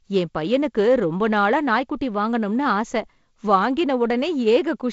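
This speech clip comes through a G.722 wideband telephone link at 48 kbit/s, with nothing above about 7.7 kHz and only the light coding wear you'd expect from that path, and there's no technical fault to point to.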